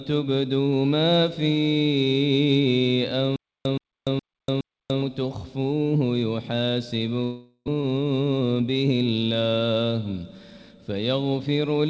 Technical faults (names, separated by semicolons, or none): stutter with silent gaps; long network dropout